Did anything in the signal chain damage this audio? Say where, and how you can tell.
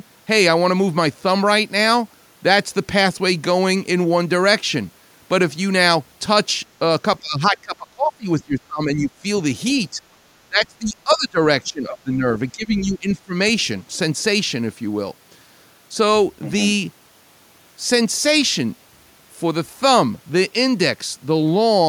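Yes. Speech suppressed in double talk occurs in six dips: 7.2 to 8.27 s, 8.44 to 9.25 s, 9.91 to 10.01 s, 10.48 to 11.4 s, 11.63 to 12.3 s and 12.52 to 13.34 s. In each, the speech level falls by roughly 10 to 25 dB, deepest in the second dip. The stage is call processing. The likely cause is an echo canceller that could not tell this talker from loudspeaker echo while both were active, so it pulled them down together.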